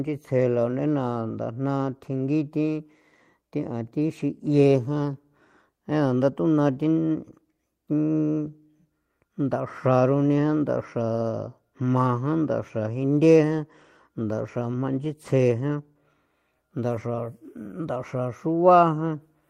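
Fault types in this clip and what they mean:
No technical faults are audible in this speech recording. No event in the audio calls for a fault description.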